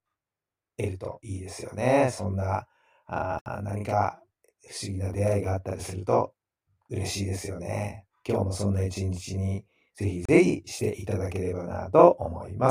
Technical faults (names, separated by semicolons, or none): channel delay (doubling); block of digital silence